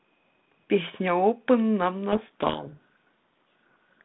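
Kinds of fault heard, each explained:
Codec payload misread: from 2.12 s the G.726 code words are unpacked with their bits in the wrong order, so decoding yields harsh distortion burying the speech. The spectrogram fills with dense smear across the telephone band, and the waveform turns jagged and noise-like.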